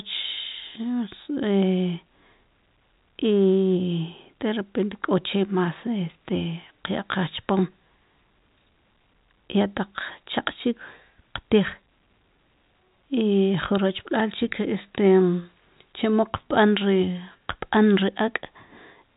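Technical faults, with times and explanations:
No faults to report here, just speech carried over ordinary G.711 telephone coding, so nothing gets through above roughly 3.8 kHz, which is simply how a phone line sounds.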